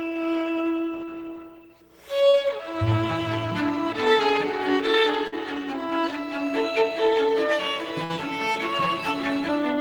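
At 2.29 to 2.35 s there is a short concealed packet loss. About 40 ms of audio never arrived in time, and the receiver covered the hole with roughly 39 ms of synthesised continuation built from the preceding sound before crossfading back into real audio. What you hear is a brief smear or wobble rather than a clean cut.

A burst of packet loss follows at 5.27 to 5.34 s and again at 8.04 to 8.11 s. Consecutive packets were lost or arrived too late. The concealer extended the last sound for about 47 ms and 54 ms respectively, attenuating it as the gap ran on, which gives a held, decaying buzz or hiss. Playback then picks up further along, so about 40 ms of content is missing in the first burst and about 60 ms in the second.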